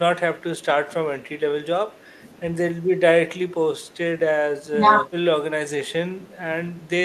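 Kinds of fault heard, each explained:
Speech suppressed in double talk: From 4.77 to 4.87 s the speech dips by roughly 10 dB for about a tenth of a second. The likely cause is an echo canceller that, with both ends talking, mistook this talker for loudspeaker echo and turned the signal down. Unlike a packet-loss dropout, the sound is attenuated rather than cut to silence.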